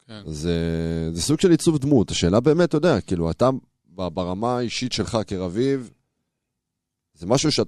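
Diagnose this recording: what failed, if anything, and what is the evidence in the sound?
Nothing in the speech signal points to a failure at any stage of the chain, from capture through conversion, processing, transmission, storage or playback.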